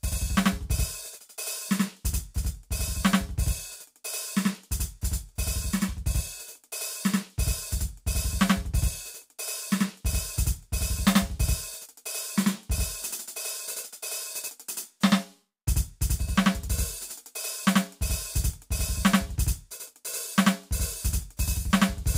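Throughout the music, a channel delay (doubling) is audible: one channel lags by about 85 ms, which fits a 4096-sample buffer, so the mono sum carries a distinct equal-level slap echo.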